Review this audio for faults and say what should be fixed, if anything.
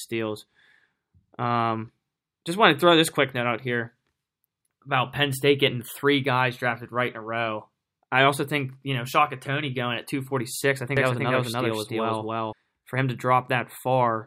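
Doubled audio track from 10.97 to 12.53 s: the speech is joined by a second, equally loud copy about 300 ms behind, full-band with no decay or room colour. It starts and stops abruptly, likely a second capture path or misaligned edit layering two copies. To prevent it, monitor only one input route per source and check edits for overlapping duplicate regions before export.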